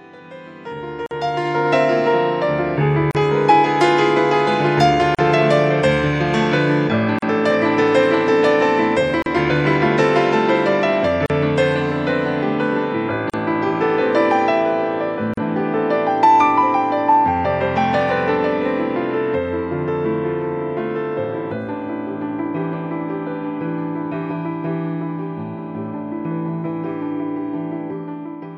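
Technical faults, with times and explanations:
1.06–1.11, 3.11–3.15, 5.15–5.19, 7.19–7.22, 9.22–9.26, 11.26–11.30, 13.30–13.34 and 15.34–15.37 s: gap at a join of encoded pieces. The sound drops out for about 38 ms (48 ms at the first) roughly every 2 s, then resumes where it stopped. Separately encoded pieces were joined with the encoder's start delay and end padding left in.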